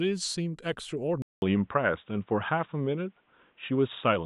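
Speech that goes silent for 200 ms at 1.22 s, then returns boxier with nothing above 3.8 kHz, a level step of roughly 5 dB and faint new background noise: likely an input switched to a poorer device. The gap and the fresh noise floor distinguish it from simple filtering.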